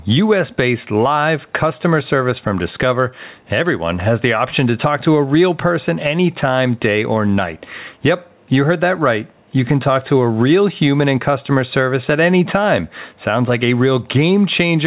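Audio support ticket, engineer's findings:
Gain pumping, throughout the speech. Gain ducks around 10 dB under each loud syllable; dynamics squashed flat. Likely cause: input gain set far too high with a fast limiter/compressor clamping each peak. Differs from a noise gate: the gain is pulled down rather than cut to silence. Differs from codec artefacts: level movement follows loudness, not bandwidth. Call path band-limited at 4 kHz, consistent with a narrowband telephone codec, not part of the pumping.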